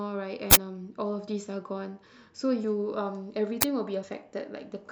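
From 0.51 to 0.56 s, an uninitialised buffer produces a loud burst of digital noise lasting about 43 ms, which fits a 2048-sample block. Playback read memory that held no audio yet. A shorter burst of the same fault at 3.62 s points to a 512-sample block.

At 2.63 s and again at 4.02 s, compressed frames are skipped. A couple of 24 ms frames are lost each time, so the speech jumps ahead by around 50 ms.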